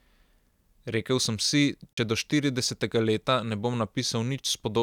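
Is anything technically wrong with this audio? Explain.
Yes. At 1.93 s the speech cuts out and stays silent until about 1.98 s, a hole of roughly 43.5 ms. When the sound returns, it has moved on in time, as if it had kept playing through the gap, so that stretch is simply missing. This is likely a Bluetooth dropout: audio packets arrived at the headphones too late, were discarded, and the output fell silent until valid data came again, which fits about three packets lost.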